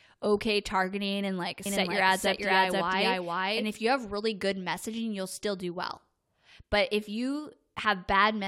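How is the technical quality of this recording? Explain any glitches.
One glitch stands out. Doubled audio track, 1.66 to 3.64 s: likely a second, slower capture path, adding a copy about as loud, half a second late, starting and stopping abruptly.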